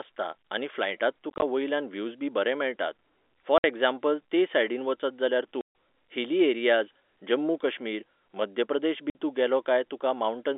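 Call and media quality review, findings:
Packet loss filled with silence: hard-edged dropouts in speech. At 1.3 to 1.42 s, after "आनी फ्लायटांत", short scattered gaps with runs up to 20 ms. At 3.58 s before "एग्जाम्पल ते सायडीन", at 5.61 to 5.71 s before "हिली एरियाज जम्मू कश्मीर", and at 9.1 to 9.15 s. Gap lengths fit 10 ms packets. Receiver inserts silence instead of concealment. Band limit consistent with G.711 telephone coding.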